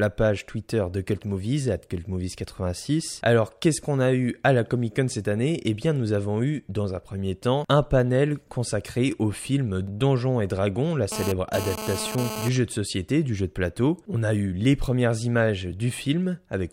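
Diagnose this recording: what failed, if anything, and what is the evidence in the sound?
GSM phone buzz, analogue stage, 11.12 to 12.49 s. Raspy 217 Hz buzz, about 8 dB below the speech. A nearby phone's data bursts were rectified.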